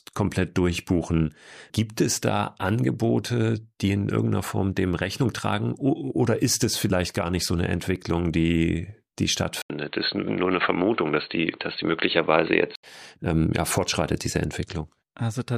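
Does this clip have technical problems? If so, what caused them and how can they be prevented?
Yes. From 9.62 s to 12.83 s, after "die die", the speech turns dull and boxy, with nothing above 4.3 kHz, a short gap of about 80 ms at the switch, and a faint new noise floor well below the speech while the level stays roughly the same. It clears again before "ähm ja fortschreitet diese". The likely cause is an input switched to a poorer device, such as a headset's narrowband call profile, for those three seconds. To prevent this, lock the recording input to one microphone and disable automatic device switching before recording.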